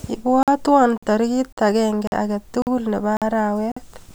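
Gap between chunks in this speech clip at 0.43, 0.98, 1.53, 2.07, 2.62, 3.17 and 3.72 s, the first just before "tarik agenge": hard-edged 48 ms silences after every 0.5 s chunk, from late playback starts or codec padding at each join.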